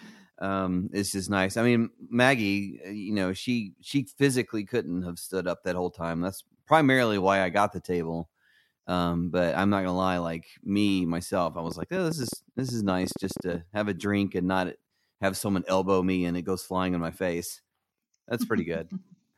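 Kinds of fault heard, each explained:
Train of clicks: a run of short, similar-shaped pulses lands on the speech from 11.67 to 13.56 s, around twenty of them at about 10.6 per second, spaced unevenly, peaking roughly 5 dB above the speech itself. They tick through gaps as well as words, which marks them as added pulses rather than a single dropout click or codec distortion tied to the signal. The likely cause is interference from nearby equipment or a faulty connection or power supply.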